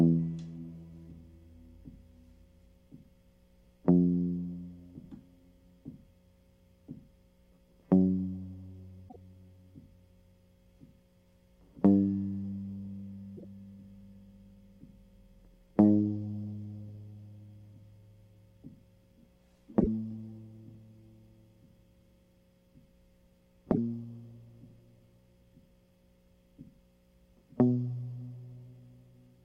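At 9.08, 13.36, 19.79 and 23.71 s the music skips forward and a brief garbled stretch replaces it, lasting about 70 to 85 ms each time. That span fits roughly three MP3 frames of 26.1 ms. The likely cause is a broken MP3 bit reservoir: after frames went missing, the following frames reached back for borrowed data and decoded bytes belonging to other frames, so the first few frames after each gap come out corrupted.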